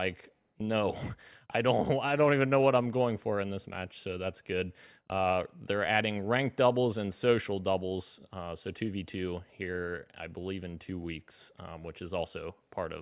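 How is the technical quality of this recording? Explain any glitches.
No glitches to explain; the recording shows no audible technical faults.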